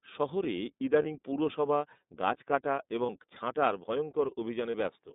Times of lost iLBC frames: 1.02-1.06, 3.06-3.10, 4.70-4.75

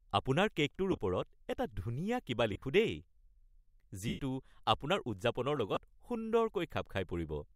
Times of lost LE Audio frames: 0.92-1.00, 2.53-2.62, 4.08-4.19, 5.75-5.77

